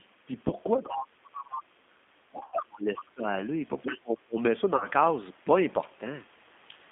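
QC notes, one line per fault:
Throughout, G.729 codec: the audio is band-limited to roughly 200 Hz to 3.5 kHz, and the coding damage is plainly audible as a rough, slightly synthetic grain. The sound fits an 8 kbit/s coder that rebuilds each 10 ms frame from a filter, a pitch predictor and a few pulses. On a spectrogram, energy stops sharply near 3.5 kHz with an empty band above. Harmonics look smeared and blocky.
0.48–0.55 s, 2.46–2.54 s and 4.76–4.88 s, VoIP packet loss concealed by the speech codec: the gaps fill with a buzzy, stretched tone that fades. The missing audio spans 20 ms, 60 ms and 40 ms, which fits one, three and two lost 20 ms packets. The decoder repeats its last pitch and filter at falling gain, and the sound stays weak for a short while afterward. On a spectrogram, flat, over-regular harmonic stripes appear. The waveform shows a decaying envelope.
0.77–1.69 s, 2.31–3.41 s and 3.82–4.37 s, speech suppressed in double talk: the voice dips, thins and breaks up in pieces. 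The deepest drops are about 25 dB, about 20 dB and about 25 dB. The likely cause is an echo canceller turning the talker down while the far side spoke at the same time. The waveform shows sudden notches in level. On a spectrogram, the upper harmonics vanish in patches.
1.37–1.41 s, other side's voice leaking through: a brief scrap of a second voice sits about 15 dB below the talker. The likely cause is loudspeaker sound that the echo canceller did not fully remove from the microphone, arriving during the suppression above. On a spectrogram, a faint second harmonic pattern overlaps the main one. In the waveform, there is a small burst inside the dip.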